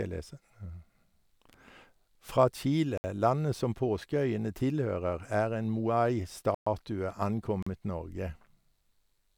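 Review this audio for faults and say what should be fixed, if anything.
Blocks of digital silence appear at 2.98–3.04 s (about 65 ms), 6.55–6.67 s (120 ms) and 7.63–7.67 s (40 ms). The speech drops abruptly to silence and returns without a fade, and the longest gap is a clear hole. This points to output buffers not being filled in time. Giving the audio thread more headroom, with larger buffers or less work per callback, would prevent these dropouts.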